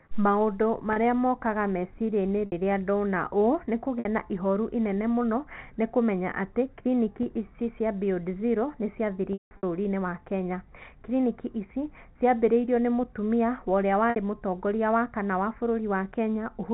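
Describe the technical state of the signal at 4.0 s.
Packet loss with pitch repetition runs from 3.99 to 4.05 s, about 60 ms, which fits two lost packets. The receiver repeats the last pitch period and fades it out, so the speech briefly holds as a buzzy tone. Then "na ihoru inene mũno" returns.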